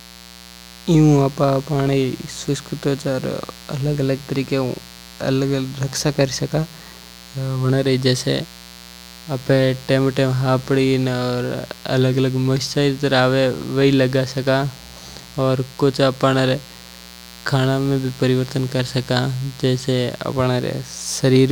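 A steady, raspy buzz sits under the speech from start to finish, roughly 20 dB below it. This is mains buzz: sharp switching spikes from the 60 Hz supply, arriving twice per cycle, have leaked into the signal path, spraying harmonics up into the kilohertz range.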